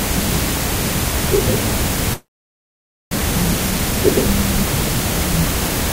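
From 2.13 to 3.20 s, a likely long network dropout: the sound decays into a fading buzz or hiss, then about 0.89 s of silence, shown as a blank spectrogram gap and flat waveform, before returning about 0.94 s further on.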